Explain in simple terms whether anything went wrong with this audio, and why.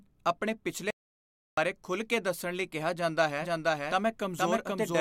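Two things went wrong here. First, an audio dropout to silence: from 0.91 to 1.57 s the speech cuts off into total dead air, with not even room tone. That's likely the input briefly disconnecting or getting muted while the recorder kept writing silence, so about two-thirds of a second is simply lost.

Second, a doubled audio track: from 3.42 s to the very end, a second copy of the speech plays along roughly half a second behind, about as loud as the original. It kicks in abruptly and has no echo tail or room colour, so it's likely a second, slower capture path or an edit that left two out-of-step copies stacked.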